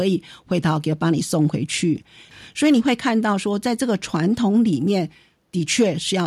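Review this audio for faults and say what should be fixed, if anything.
Nothing here needs fixing.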